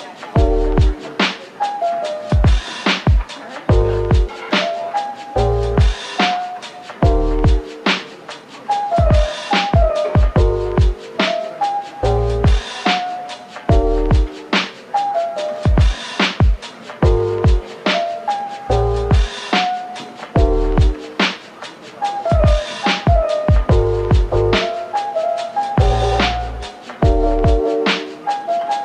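Timecode bleed runs through the whole recording: a faint chirping warble, far below the main sound, from linear timecode at 24 frames per second leaking in. On a spectrogram it shows as steady bands near 1 and 2 kHz, flickering as the code toggles between them.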